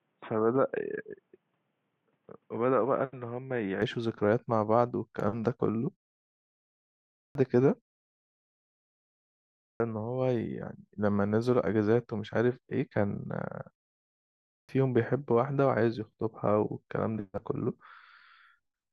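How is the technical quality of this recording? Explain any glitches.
The recording has two kinds of fault: a dull, band-limited opening and three spots where speech begins with its first sounds missing.

From 0.0 to 3.82 s the speech sounds boxy and muffled, with nothing above 3.8 kHz. It is about 5 dB quieter than what follows and carries a faint background noise of its own, roughly 45 dB below the speech. The change is seamless, with no gap at 3.82 s. The likely cause is an input switched to a poorer device: a narrowband microphone or headset call profile captured the opening before the better input took over.

At 7.04, 9.49 and 14.39 s, speech starts abruptly out of silence, and each onset loses roughly 0.3 s (311, 310 and 298 ms). This is a clipped start after a pause. During the preceding gaps of 1.15, 1.75 and 0.71 s, the output device went idle. When sound resumed it needed about a third of a second to wake and lock again, so the opening syllables were swallowed.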